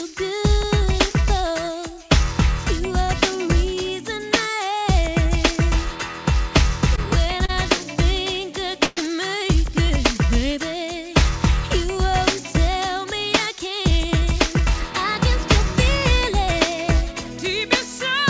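The audio comes through a call path whose sound fits G.722 at 64 kbps, with nothing above 8 kHz. At 6.96 and again at 7.45 to 7.51 s a sound is briefly held too long with a slight buzz or dip. These are short stalls from late packets: the jitter buffer ran empty and the receiver stretched the last sound by about 15 ms and 31 ms until the packets arrived, so nothing is lost. From 8.85 to 8.99 s a longer call audio freeze holds the sound as a fading buzz or hiss for about 121 ms before the audio resumes where it stopped, likely because packets were held up in transit and the jitter buffer drained. From 12.71 to 14.09 s the audio runs slightly hurried at unchanged pitch, about 106% speed. This is a jitter buffer speed-up, in which the receiver trimmed short pitch-period pieces, around a tenth of a second in total, to cut excess buffered delay.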